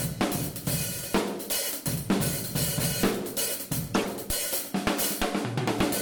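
At 3.92 s the everyday sound is broken by a corrupt frame decoded. It lasts until 4.07 s, roughly 0.15 s. Over that stretch, several consecutive compressed frames, around seven, carry flipped bits. The decoder plays them regardless. Misread codes and gains place energy at frequencies where none belongs. The result is a short glitch where that misplaced energy sounds out. Its peak sits somewhere near -20 dBFS. It ends as clean frames resume.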